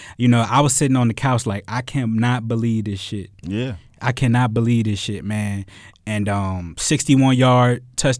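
No technical faults can be heard anywhere in the speech. Nothing in the recording, transmission or playback chain leaves an audible trace at any point.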